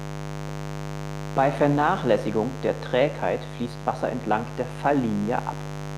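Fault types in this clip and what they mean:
mains buzz: Interference from the 50 Hz mains supply adds a steady, raspy buzz under the speech throughout, only about 10 dB below it.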